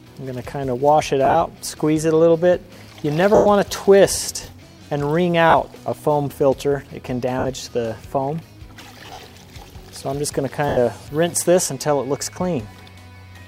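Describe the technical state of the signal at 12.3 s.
At 12.33 to 12.36 s the signal has a dropout from lost LE Audio frames, about 30 ms of missing audio, which fits three 10 ms LC3 frames. The decoder fills the gap by repeating the last good spectrum with randomised signs. Any tonal content at that point briefly turns into a noisy, smeared patch before normal decoding resumes at 12.36 s.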